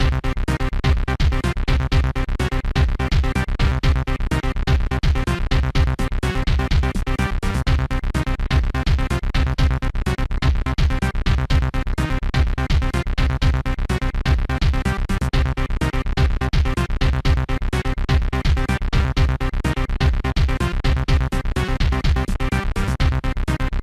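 No technical faults detected anywhere in the recording.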